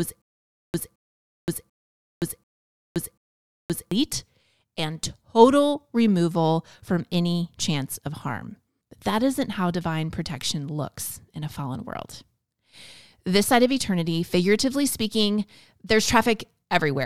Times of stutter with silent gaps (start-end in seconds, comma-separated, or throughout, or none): 0.00-3.91